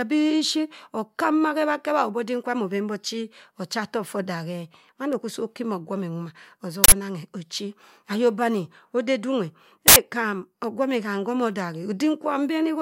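Uninitialised buffer bursts hit this speech clip at 6.84 s and again at 9.88 s, each lasting 0.08 s as a short, loud blast of digital noise cutting through the speech. Both times an 80 ms stretch of output was played out before any audio had been written into it, so whatever stale values sat in that memory were sent to the output as if they were samples.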